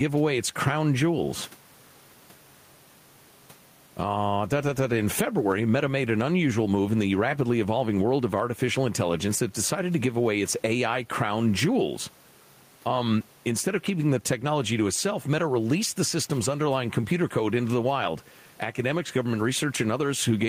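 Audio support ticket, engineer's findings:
Gain pumping, throughout. Swing around 10 dB. Speech squashed, dynamics flattened. Likely cause: input gain set far too high, fast limiter/compressor clamping on every peak, then releasing. Room noise, about 38 dB below speech.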